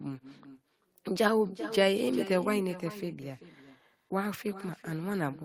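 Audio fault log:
throughout — echo with no canceller: the far end is playing the call over a loudspeaker, its microphone picks that playback up again, and no echo cancellation strips it out, so the speech returns after the full network round trip. Every phrase is trailed, roughly 400 ms later, by a second copy sitting about 13 dB below the original, thinner from its pass through a speaker, air and microphone, which smears each phrase into its own delayed shadow.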